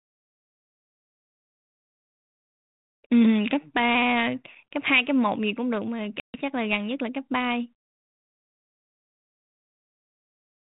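Speech over a G.726 ADPCM link at 32 kbit/s, with light codec damage and nothing above 4 kHz. There's packet loss on an ADPCM call at 6.2 s: a hard-edged 140 ms silent hole, roughly seven packets' worth. After it, the decoder's predictor and step size are out of step, so the sound comes back slightly wrong until about 6.41 s.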